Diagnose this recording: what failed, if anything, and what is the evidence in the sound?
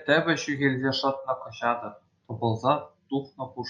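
Nothing has failed here; the speech comes through a call path doing its ordinary job, with the top end easing off around 12 kHz as you'd expect from an Opus-coded call.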